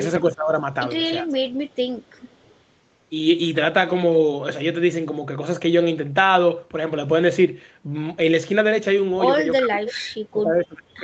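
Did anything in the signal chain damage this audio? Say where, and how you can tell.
Yes. From 0.21 to 0.53 s and 1.22 to 1.48 s the speech dips by about 15 dB, and from 9.6 s to the end it sinks by roughly 30 dB. This is likely speech suppressed in double talk, in the call processing: the echo canceller turned down the near talker while the far side was speaking.

At 1.68 to 1.76 s and 1.95 to 2.59 s, a faint copy of the voice trails it by 386 ms, about 30 to 40 dB below the speech. This is likely an echo leak, also in the call processing: a loudspeaker's echo was not fully cancelled and came back down the line.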